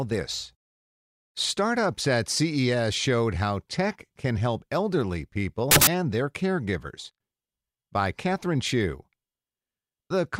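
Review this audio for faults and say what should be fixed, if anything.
Between 5.71 and 5.87 s, right after "tech can help elderly" and before "their caregivers", the speech turns into a burst of loud, harsh broadband noise. These are samples built from the wrong bytes. Each value was assembled misaligned or byte-swapped, so rapidly changing low bits became its largest part. Fix the reader so sample alignment and byte order match the stream's format.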